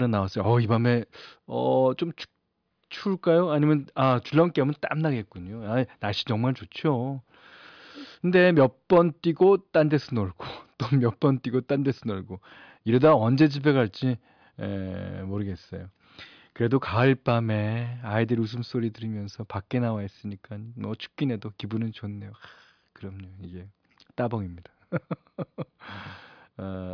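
No technical faults can be heard in this speech recording. There is nothing in it that needs a time or a value to be pointed out.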